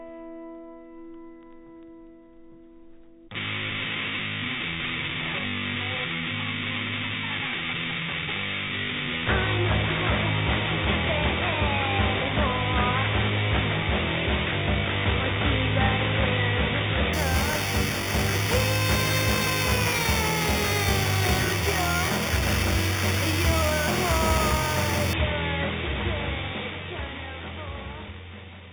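From 17.13 to 25.13 s, imaging from sample-and-hold upsampling appears. Samples were repeated unsmoothed, fitting an 8 kHz source raised to 48 kHz. A metallic fizz fills 4 to 8 kHz, about 11 dB below the sound.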